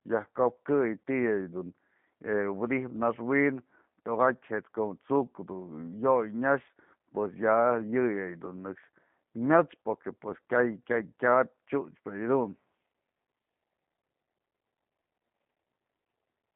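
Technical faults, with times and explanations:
Throughout, G.729 codec: the speech is rebuilt from a vocal tract filter and sparse pulse excitation, giving a rough, slightly synthetic buzz consistent with an 8 kbit/s codec. On a spectrogram the band stops sharply near 150 Hz and 3.4 kHz, with smeared, blocky harmonics.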